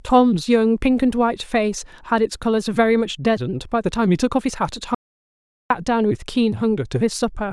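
At 4.95 s the speech cuts off abruptly. What follows is an audio dropout to silence lasting until 5.70 s, about 0.76 s. The gap is silent, with no room tone or hiss underneath. The speech then resumes mid-flow. Whatever was spoken in that stretch is simply missing. The likely cause is a brief loss of input, such as a link failure or momentary mute, while recording carried on writing silence.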